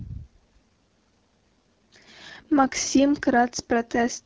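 From start to finish the speech carries AMR wideband (HD Voice) codec damage, and the rough, raspy texture points to one of its lowest rates, around 8.85 kbit/s.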